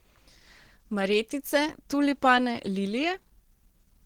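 Throughout the speech, the audio has most likely passed through low-rate Opus compression; the muffled, hoarse quality points to the hybrid speech mode at roughly 16 kbps. Bands starved of bits are filled with noise, so the damage is plainly audible across the whole clip.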